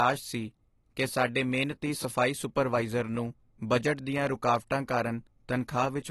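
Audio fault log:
Throughout, AAC compression: the speech sounds dull and smeared, with nothing above about 12 kHz, and there's a warbly, fizzy texture on sibilants and held sounds that's easy to hear. That's most likely a low-bitrate AAC-LC encode, which fits roughly 32 kbps. At that budget the encoder drops the top end entirely and quantises what's left too coarsely, so the fine detail breaks up into that swirly grain.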